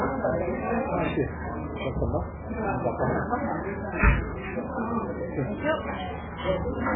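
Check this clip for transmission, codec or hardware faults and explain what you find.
One codec fault runs through the whole clip. MP3 compression, present throughout, likely at a very starved bitrate around 8 kbps: the encoder discards everything above 3.7 kHz and drops weak frequency lines that flicker between frames, leaving dull, heavily watery, swirling sound with smeared attacks.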